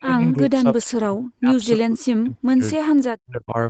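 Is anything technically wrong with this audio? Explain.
Yes. The speech keeps sinking and breaking up, and faint echo scraps slip through near the start.

Speech suppressed in double talk occurs from 0 to 1.51 s, 1.76 to 2.61 s and 3.26 to 3.57 s. In each span the speech dips and chops out in pieces, falling by about 40 dB at its deepest in the first two and about 35 dB in the last. This is likely an echo canceller meeting both sides talking at once: unable to tell the local talker from loudspeaker echo, it turned everything down.

An echo leak appears at 0.30 to 0.34 s and again at 0.82 to 0.86 s. Each is a brief, faint scrap of the voice trailing 312 ms behind, about 35 dB below the speech. This likely comes from a loudspeaker on the far end whose echo canceller left a residue of what its microphone caught, which was then sent back down the call. The audio tops out at 8 kHz, as expected for the call path.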